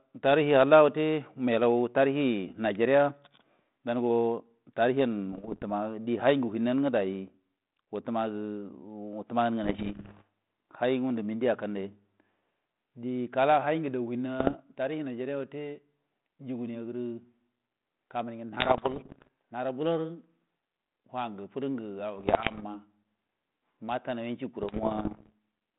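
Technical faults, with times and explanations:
5.32–5.63 s, 9.64–10.22 s, 14.40–14.57 s, 18.59–19.28 s, 22.18–22.64 s and 24.59–25.32 s, bit errors on an ADPCM link: each burst brings pops and gritty roughness with brief jumps in level, at roughly 0.7 to 1.5 flipped bits in a hundred. A corrupted difference code knocks the decoder's step size and predictor off track, so every error rings on for several milliseconds before the adaptation recovers. The narrow 150 Hz to 3.7 kHz band and light coding damage between bursts point to a 32 kbit/s G.726 link.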